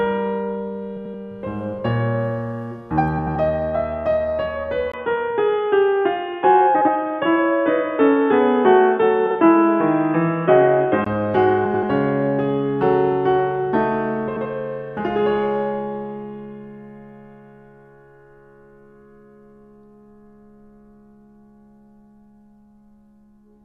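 At 0.97 to 1.14 s and again at 3.18 to 3.36 s, frames out of order: two adjacent stretches of the music were decoded in swapped sequence, each about 85 ms, which fits runs of four codec frames. The passage plays with its halves exchanged, a garbled flutter with no time lost.

From 4.92 to 11.06 s the input likely switched to a poorer device. After a 20 ms silence at the change, nothing reaches above 3.6 kHz, so the music turns dull and boxy at about the same level, with a faint new noise floor well beneath it. It clears again at 11.06 s.

Within that narrowed stretch, frames are out of order at 6.74 to 6.89 s, where the swapped halves are each 64 ms long, and at 9.26 to 9.35 s, where they are each about 43 ms long. The same swapping returns at full bandwidth at 11.65 to 11.83 s and 14.28 to 14.46 s, where each half is again about 85 ms long.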